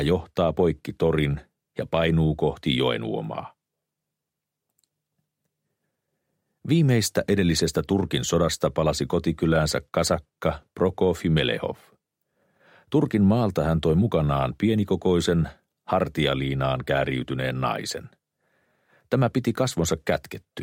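No technical faults can be heard at any point in the audio.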